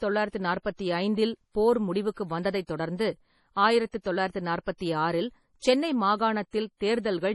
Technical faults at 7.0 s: MP3 compression

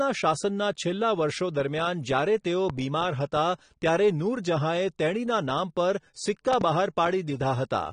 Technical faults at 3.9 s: AAC compression

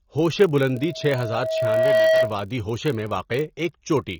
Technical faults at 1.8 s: AAC compression; block size mismatch (padded); loudspeaker feedback squeal

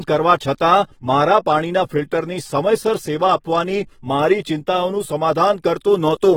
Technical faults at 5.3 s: AAC compression

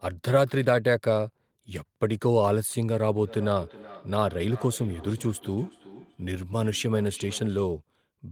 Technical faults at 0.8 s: none

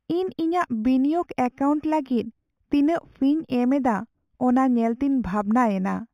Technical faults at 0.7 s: imaging from linear upsampling

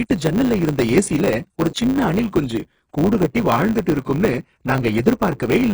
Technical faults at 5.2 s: HE-AAC compression; block size mismatch (truncated)

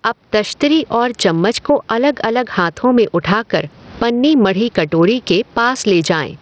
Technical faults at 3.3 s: gain pumping; Bluetooth SBC compression

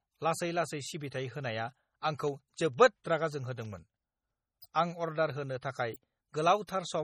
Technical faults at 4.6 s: MP3 compression; word clock ticks; pre-echo

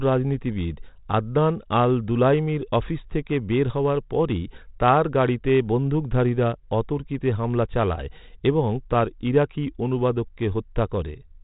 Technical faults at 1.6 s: none

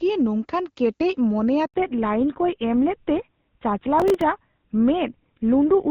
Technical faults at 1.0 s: none

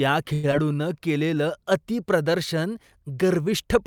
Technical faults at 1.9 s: none

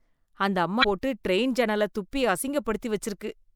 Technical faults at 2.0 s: none

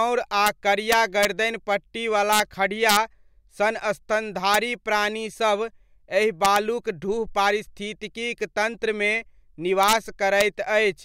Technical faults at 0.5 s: integer overflow

